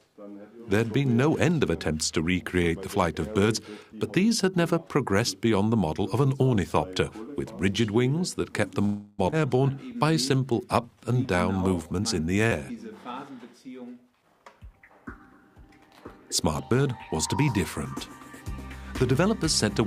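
A held sound at 8.85 s stretches into a fading buzz for 0.33 s before the audio resumes at 9.21 s exactly where it left off, with nothing lost. This is a call audio freeze, likely from packets stalling in transit until the jitter buffer drained and the receiver extended the last sound. Just after, at 9.31 to 9.34 s, playback jumps forward with only a 17 ms join. Roughly a third of a second of material is gone, the two sides butted together. This skip ahead dropped queued audio and cut the accumulated delay by about 200 ms. From 9.71 to 11.97 s the audio drags at 89% of normal speed with unchanged pitch, drawn out. That is a jitter buffer slow-down, with the receiver repeating pitch periods and pause fragments to add 246 ms of reserve. A brief smear at 12.47 to 12.53 s marks short concealed packet loss: 40 ms never arrived in time, and the decoder filled 44 ms by continuing the preceding sound, then blended back. 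The audio then sounds hurried from 13.37 to 14.90 s at 108% speed, and runs faster again from 16.44 to 17.41 s at 104%, pitch intact. Both are jitter buffer speed-ups, trimming short pitch-period slices to shed around 150 ms and 50 ms of excess buffered delay.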